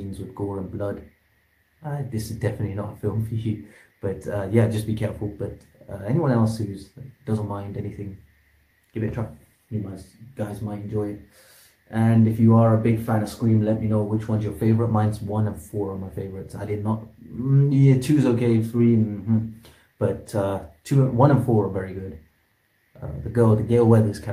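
No technical faults can be heard anywhere in the audio.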